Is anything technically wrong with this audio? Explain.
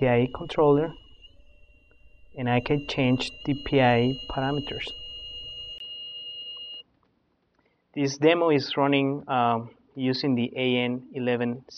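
Yes. At 5.78 s the sound breaks for 20 ms and then changes character until the end. This is likely an input switched to a poorer device. Nothing remains above 6.1 kHz, so the sound turns duller. Level drops about 5 dB. A new noise floor appears, about 45 dB below the signal.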